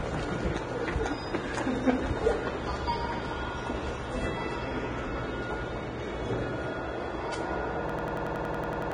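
An everyday sound recording. The treble is hissy and grainy, with nothing above 9.7 kHz, likely from heavy Vorbis compression at a low bitrate near 23 kbps. From 7.90 to 8.92 s, a system hang loop repeats one 93 ms slice at 10.8 Hz, a machine-gun stutter that fits a 4096-sample buffer. About a second of audio is lost.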